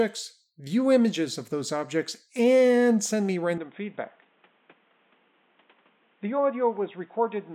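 Right after "objects and send me", at 3.58 s, the speech abruptly turns dull and boxy and stays that way to the end at 7.55 s. Nothing comes through above 3.8 kHz, it drops a bit in level, and a faint new background noise sits well under it. There's no gap at the changeover. That's most likely the input switched to a poorer device, something like a headset in call mode replacing the original microphone.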